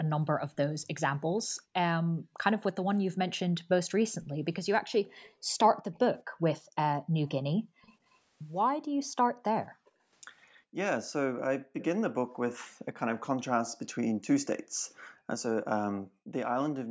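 From 0.03 to 3.26 s, and again from 4.19 s, background gated by the echo canceller pulls the room sound down by up to about 40 dB while far-end audio plays, leaving dark gaps in the spectrogram's noise floor. From 5.23 to 5.99 s a faint copy of the speech trails 221 ms behind, far quieter, likely an echo leak through the canceller, seen as ghost harmonics offset in time. The gating continues to 7.82 s. The echo returns from 7.26 to 9.90 s at a 233 ms delay. Gating resumes from 8.88 to 12.96 s, with a brief, somewhat louder echo fragment at 11.80 to 11.84 s delayed 246 ms. A final gated stretch runs from 14.56 s to the end, its waveform floor flattening during each dip.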